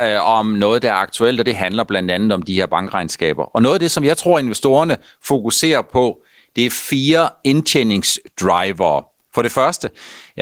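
A speech recording with gain pumping running through its whole length. The gain swings by around 10 dB. Loud and quiet passages sit unnaturally close in level and the sound is squashed. The likely cause is input gain set far too high, with a fast limiter or compressor clamping down on every loud peak.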